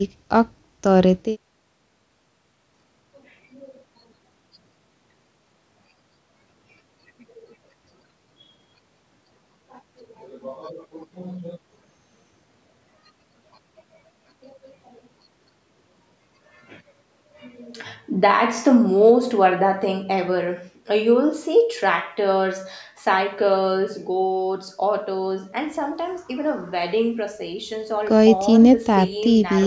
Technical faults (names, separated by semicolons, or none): none